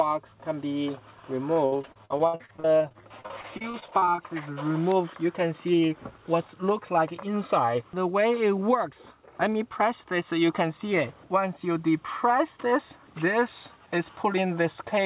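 From 1.54 to 4.20 s the sound turns choppy, with pieces dropping out. This is repeated packet loss: about thirty short holes, none longer than 60 ms, each patched by stretching the preceding sound, so roughly 29% of that stretch is concealed rather than real audio.

Overlapping its end, from 4.10 to 4.74 s, the audio drags at unchanged pitch, running at 91% speed with drawn-out sounds. This is a jitter buffer slow-down. The receiver, short of buffered audio, repeated pitch periods to add 64 ms of reserve.

At 5.67 to 6.34 s and again at 7.27 to 7.83 s the audio sounds hurried while keeping its pitch, running at 106% and then 109% speed. These are jitter buffer speed-ups. With too much audio queued, the receiver trimmed about 50 ms each time by cutting short pitch-period pieces.

Throughout, nothing is heard above 4 kHz, which points to a narrowband call codec such as G.711 A-law at 64 kbps.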